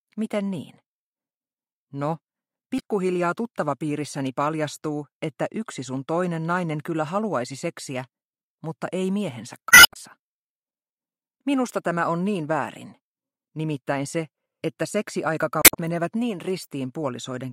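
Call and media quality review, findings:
Damaged data in compressed stream: brief glitch bursts at 2.78–2.82 s, 9.68–9.97 s (adds about 59 ms) and 15.62–15.76 s. Decoder misreads corrupt frames, loses sync, resyncs at the next header. Spectrogram shows broadband smears; waveform shows abrupt discontinuities.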